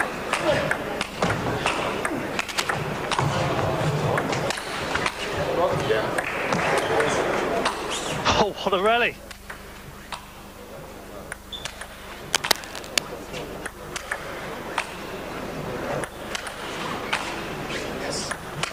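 At 2.48 s a burst of scratching noise breaks in and lasts until 2.71 s. It is dense and uneven, about as loud as the sound itself. This is cable scratch noise. A worn cable, connector or control was likely being moved, so its contact resistance jumped around rapidly. The same rustling scratch returns from 12.33 to 12.99 s. This time it lasts longer, roughly two thirds of a second, and is again about level with the sound.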